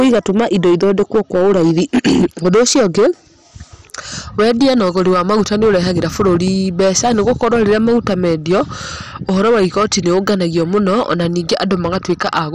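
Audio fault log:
throughout, hard clipping: the signal drives a stage about 8 dB past its limit, so a fair share of peaks are flattened, putting harsh fuzz on every loud stretch of speech.
throughout, MP2 compression: heavy sub-band starvation, likely from an MP2 encode at a rate fitting 56 kbps, leaves nothing above 15.8 kHz and makes the speech dull, gurgling and granular.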